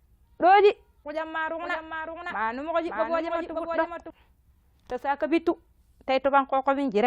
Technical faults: doubled audio track

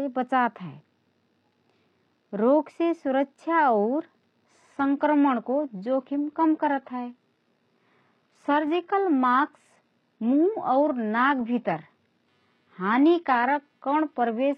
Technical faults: adaptive stream at a lower bitrate

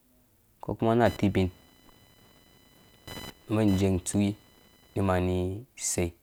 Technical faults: computer activity noise

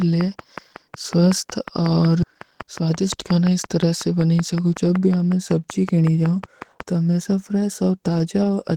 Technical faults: train of clicks; skip ahead; jitter buffer speed-up

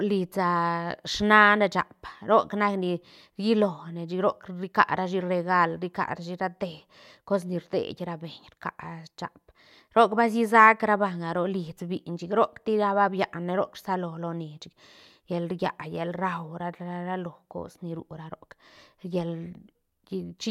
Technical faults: none

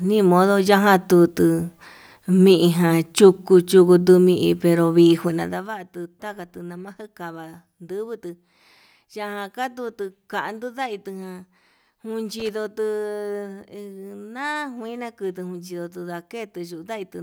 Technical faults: loose connector crackle

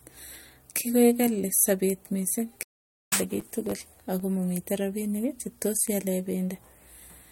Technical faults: stream reconnect; processor overload crackle

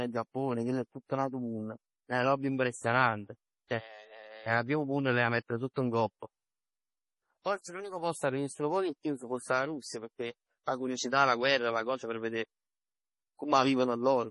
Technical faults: MP3 compression; pre-echo

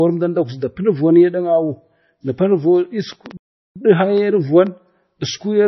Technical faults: MP3 compression; train of clicks; playback stall

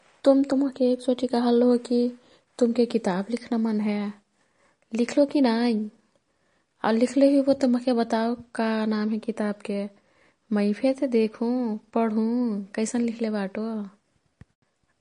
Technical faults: MP3 compression

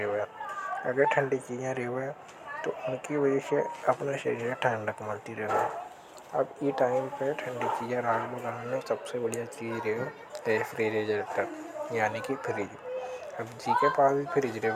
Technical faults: none

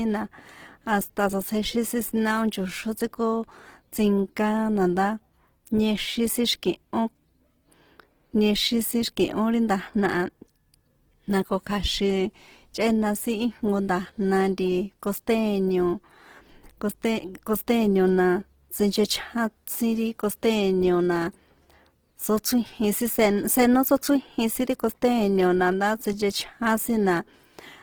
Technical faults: Opus compression; pre-echo

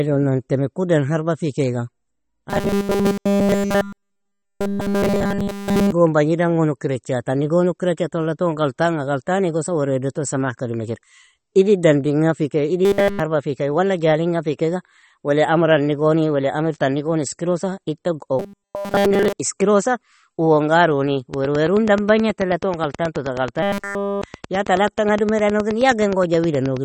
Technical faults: MP3 compression; robotic sound from repeated short buffers; train of clicks

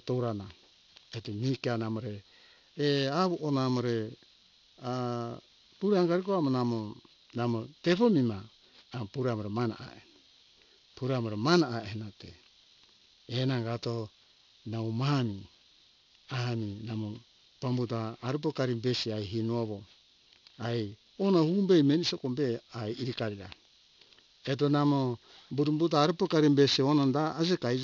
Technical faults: aliasing

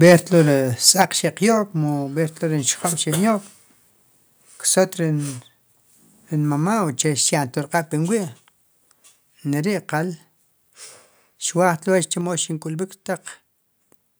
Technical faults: microphone overload; microphone volume stepped down

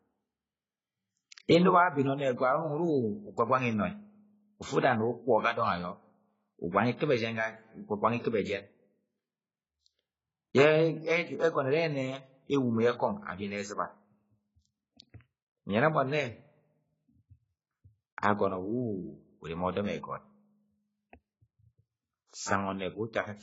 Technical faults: AAC compression

